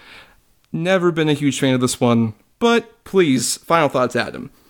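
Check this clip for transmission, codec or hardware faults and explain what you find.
Nothing in the speech signal points to a transmission, codec or hardware problem.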